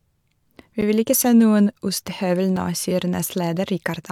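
At 0.81 s, just before "vil ikke se noen", and again at 2.56 s, the speech drops into a block of digital silence lasting about 10 ms and then 5 ms. The output buffer most likely went unfilled. Unlike a faded dropout, the cut is abrupt, and both gaps are short enough to be heard as a tick or dip rather than as silence.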